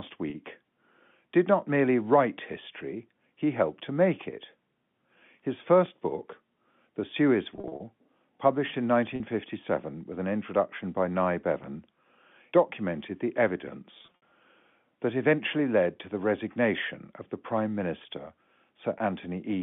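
Speech carried over a G.711 telephone path, band-limited to roughly 150 Hz to 3.5 kHz, has two kinds of fault. Packet loss with pitch repetition is heard as brief held, buzzy stretches where the receiver repeats the last pitch period to cover missing audio. This happens at 0.30 s (40 ms), 9.16 s (40 ms) and 18.98 s (20 ms), which fits 20 ms packets. Longer stretches run from 7.56 to 7.80 s and 13.98 to 14.22 s, each with 140 ms lost across 240 ms, in runs of up to 60 ms. A DC step, a sudden shift in the waveform's zero line, appears at 5.86 s and 11.64 s. Each is heard as a low thump under continuing speech, and the offset then drains away as the path's roughly 2 Hz high-pass filter pulls the signal back to centre.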